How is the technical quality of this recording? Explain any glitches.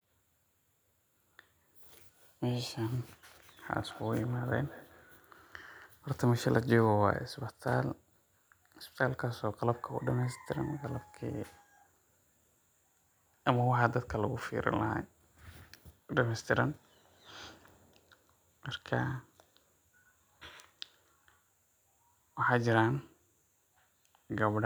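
The recording has one audible fault: a feedback echo between two devices, from 3.66 to 5.75 s. During that stretch each piece of speech comes back at a regular interval of around 200 ms, thinner and more ringing with each pass. The repeats peak at about 22 dB below the speech. A second device in the same room replays what the first microphone sent, and that microphone picks it up again. Each device's echo canceller removes only its own playback, so the loop goes uncancelled.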